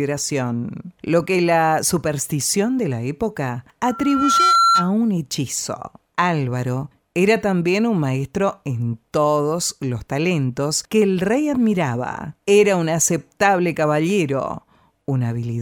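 At 3.84 s a loudspeaker feedback squeal begins: a pure tone at 1.4 kHz swells over roughly half a second until it sits about 5 dB above the surrounding sound, then stops at 4.93 s. The microphone was hearing its own loudspeaker, and at that one frequency the loop gain passed unity, so the tone fed itself. A spectrogram shows a single bright horizontal line thickening as it rises, and the waveform's envelope grows visibly during the build-up.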